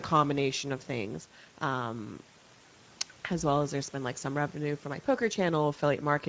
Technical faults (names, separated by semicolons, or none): Speex codec